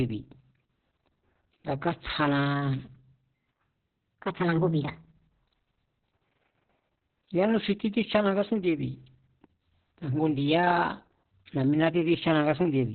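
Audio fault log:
Throughout: Opus voice compression. The speech is heavily muffled, hoarse and faintly robotic, with nothing above 4.4 kHz. The coder has fallen back to narrowband linear-prediction coding and rebuilds the voice from a coarsely quantised excitation signal, which fits a bitrate near 6 kbps and long frames. A spectrogram shows a hard ceiling near 4.4 kHz, smeared harmonics and noisy fill between them. The waveform looks blunted.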